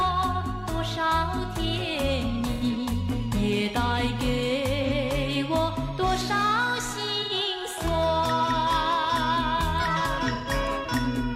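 AAC frame loss with concealment hits this audio four times, at 2.53 s, 4.83 s, 7.22 s and 10.33 s. The gaps last about 85, 43, 85 and 128 ms, which fits one to three lost frames. The decoder rebuilds each gap from the last good spectrum, so each one is a short smeared, phasey blur.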